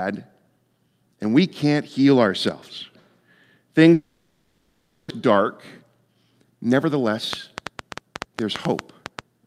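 The recording is speech, and from 3.93 to 5.12 s it breaks up in a way that points to a long network dropout as the likely cause. The last sound is stretched into a fading buzz, then about 70 ms of silence, and when speech resumes roughly a second of it is simply gone. Across the gap the delay shifts by something like 150 ms. A short packet-loss glitch would patch only a few tens of milliseconds in place; here a whole stretch is skipped. From 6.01 to 7.09 s a jitter buffer speed-up squeezes the speech to 110 % speed. Around a tenth of a second is trimmed out in small pitch-period-sized pieces, so delivery sounds hurried while the pitch stays put. That is what separates it from a resampling or clock-rate error, where faster playback would also raise the pitch. From 7.33 s to the end, a train of clicks ticks over the sound at about 6.4 per second, spaced unevenly and peaking around 15 dB above the speech. 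It is likely interference from nearby equipment or a faulty connection or power supply. Unlike a single pop or random crackle, these pulses share much the same shape and keep recurring, audible through the pauses as well as over the speech.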